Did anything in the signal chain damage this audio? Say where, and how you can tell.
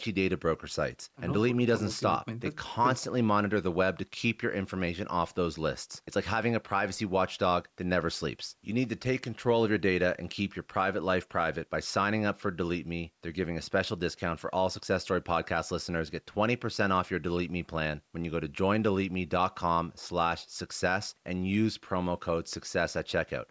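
No, the speech shows only the expected effects of call microphone processing, with the lowest bass trimmed by its high-pass filter and no content above 8 kHz, and nothing else in the chain leaves a mark.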